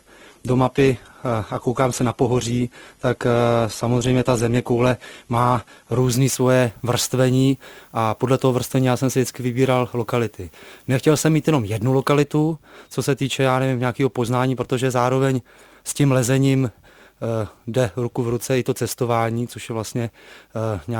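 From the start to 6.0 s the audio is dull and smeared, with nothing above about 12.1 kHz and coarse codec artefacts. This is an adaptive stream starting at a low bitrate: the player began on a cheap rendition, which sounds like Opus at around 16 kbit/s, then stepped up to roughly 64 kbit/s once it had gauged the connection. Unlike a dropout or rebuffer, the quality jumps cleanly at 6.0 s with no gap or stall.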